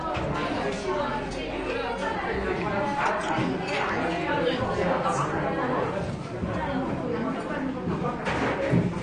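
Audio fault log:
Throughout, AAC compression: dull, smeared sound with a fizzy, warbling texture and nothing above 9.6 kHz, likely from AAC-LC coding at a bitrate that fits 32 kbps.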